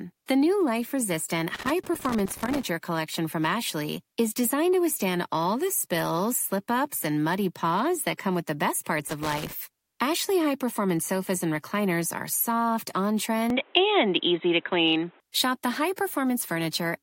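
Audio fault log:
1.55–2.63 s and 9.09–9.53 s, loose connector crackle: two irregular bursts of crackle and scratching, the first lasting about a second and the second under half a second. A worn or dirty contact in the signal path is making and breaking intermittently as it shifts, so the speech is chopped into fragments. The irregular spacing of those clicks gives the rough, scratchy texture.
13.50–15.20 s, input switched to a poorer device: the speech abruptly turns dull and boxy, with nothing above 3.9 kHz, a shift in level of roughly 5 dB, and a fresh background noise sitting roughly 35 dB under the speech. There is no gap at the changeover. This is likely the recording input jumping to a different microphone or a headset call profile, whose narrower band and own noise floor and gain replace the original path's tone.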